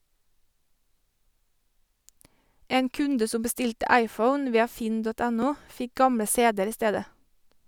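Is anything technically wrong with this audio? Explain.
Yes. From 1.58 s to 7.35 s the speech carries a regular click, about four in all, recurring every 1.92 s. These are likely clock drift buffer slips: two mismatched device clocks, roughly 700 ppm apart, periodically force a small block of samples to be dropped or repeated.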